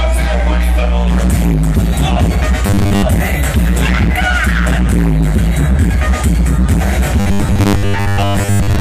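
From 2.66 to 3.03 s, and again from 7.2 s to the end, the sound turns into a rigid, metallic buzz at 100 Hz. This is robotic sound from repeated short buffers. A 10 ms chunk is likely being replayed while most of the real audio is skipped.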